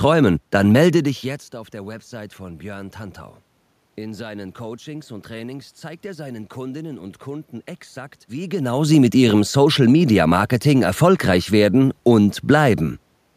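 Nothing stood out as a technical fault on listening; the background room noise and the level shifts around 1 s and 8.5 s, where the talker's distance from the microphone changes, are part of the recording itself.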